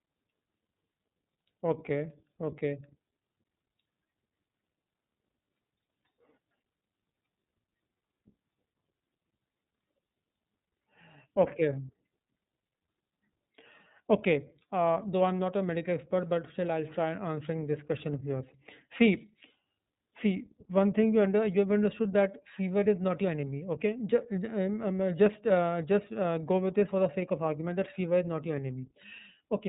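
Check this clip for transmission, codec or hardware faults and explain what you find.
One codec fault runs through the whole speech clip. iLBC codec, throughout: each 30 ms frame is coded independently, leaving speech plainly rough and synthetic, with nothing above 3.8 kHz, which fits the 13.33 kbps mode.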